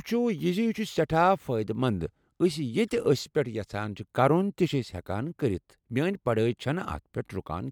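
No technical faults can be heard anywhere in it.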